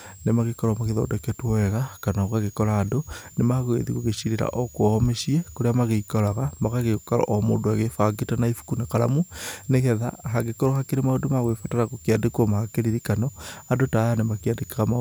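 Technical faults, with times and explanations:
Throughout, switching supply whistle: a thin high whistle near 7 kHz, well below the speech in level, drifts between 6.64 and 7.83 kHz as the power supply's switching rate shifts with load, showing on a spectrogram as a faint, wavering horizontal line.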